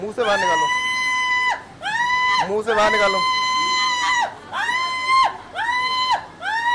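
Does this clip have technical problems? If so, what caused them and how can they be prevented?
No, this clip does not have technical problems.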